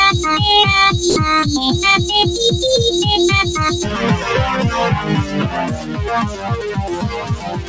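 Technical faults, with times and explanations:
Throughout: noise suppressor applied to music or sounds. A speech-tuned suppressor treats held tones and tails as noise. Level swings by around 10 dB, so the sound pumps and thins.
1.10–1.16 s: sound dropped by the voice detector. For 60 ms the sound gives way to steady comfort noise, likely because the detector judged it background and stopped sending.
5.69–6.00 s, 6.28–6.71 s, 6.93–7.68 s: sound cut by the noise suppressor. Steady and decaying parts sink by about 8, 7 and 10 dB respectively. Sharp onsets survive better.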